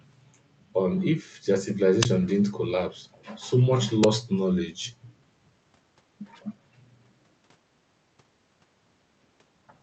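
At 1.69 to 1.74 s, an echo leak appears: a faint copy of the speech trailing about 204 ms behind, around 15 dB below the direct sound. It is likely the far end's loudspeaker reaching its microphone past an incompletely converging echo canceller. On a spectrogram it shows as a weak, time-shifted duplicate of the preceding harmonic pattern.

At 2.03 to 2.05 s, an uninitialised buffer bursts through: roughly 23 ms of digital noise, consistent with a 1024-sample block played before audio was written into it. The waveform shows a sudden rectangle of garbage, and the spectrogram shows a broadband vertical slab, possibly with tonal striping.

The echo leak returns at 2.29 to 2.37 s and 3.13 to 3.25 s, again 204 ms late but much quieter, around 30 and 35 dB down. It is barely visible as faint ghost traces.

At 4.04 s, a second uninitialised-buffer burst lasts only about 6 ms, fitting a 256-sample block. 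It is a thin vertical spike on both displays. Across the whole clip, the band-limited Opus call path leaves nothing above 8 kHz in the spectrogram.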